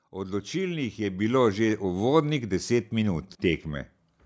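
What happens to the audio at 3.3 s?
At 3.3 s the level is still climbing under automatic gain rising, which runs from 0.05 s to 3.71 s. The gain control judged the input too quiet and kept raising it, about 12 dB in all, so voice and background swell together.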